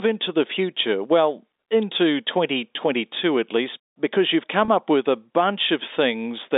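At 4.65 to 4.68 s, between "at least because you've" and "up with a", there is a packet loss with pitch repetition. About 30 ms of the speech went missing, which fits a single lost packet. The receiver filled the hole by repeating the last pitch period it had. Because the gap is short, it comes across as a brief held, buzzy sustain rather than a dropout. The narrow telephone band of the G.711 line stays audible throughout.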